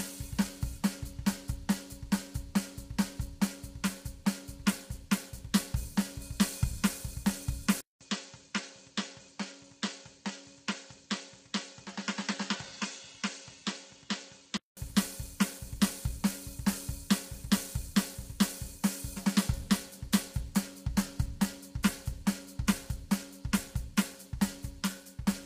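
Low-delay AAC compression runs through the whole music clip, with heavy damage that points to AAC-ELD at a low rate, around 24 kbps. This codec works in very short frames, so it cannot resolve closely spaced harmonics well, and at this bitrate it runs short of bits. Sustained tones turn rough and grainy, noise fills the gaps between harmonics, and nothing is present above 15.6 kHz, leaving the top band thin and synthetic.

An input switched to a poorer device likely explains the change from 7.81 s to 14.77 s. A gap of about 200 ms marks the switch. The replacement input passes a narrower band, with nothing above 7.6 kHz, so the music suddenly sounds dull and boxy. Its level drops by a few decibels, and a faint new noise floor appears, roughly 45 dB below the music. At 14.77 s the original input returns, and the wider, clearer sound comes back.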